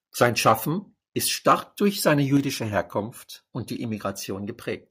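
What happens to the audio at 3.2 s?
Nothing goes wrong at 3.2 s; the speech carries on intact through that moment, with no dropout, glitch or distortion.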